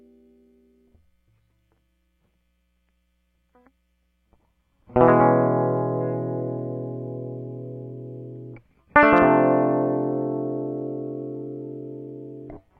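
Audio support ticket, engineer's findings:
Listened to the full music clip and nothing stood out; no findings to log.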